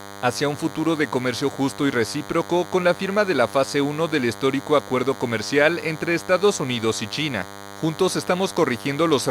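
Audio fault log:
Throughout: DECT cordless phone buzz. A thin, steady buzz sits under the speech for the whole clip, roughly 15 dB below it. Its fundamental is 100 Hz, with a dense stack of harmonics climbing well above that, which gives it a hard, rasping edge. The cause is radio interference. A nearby DECT handset or base transmits a short burst every 10 ms, and the audio circuitry rectifies each burst into a click-like pulse.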